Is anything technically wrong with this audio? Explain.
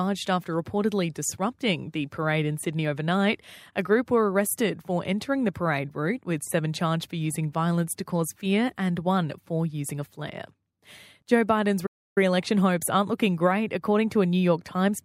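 Yes. At 11.86 s the speech drops abruptly to silence for about 300 ms and resumes at 12.18 s, just before "election hopes aren't looking". This is a playback stall. The likely cause is the player running out of buffered data or its thread being blocked, so output halts mid-flow until it recovers.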